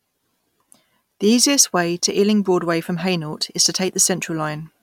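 No technical faults can be heard anywhere in this recording of speech.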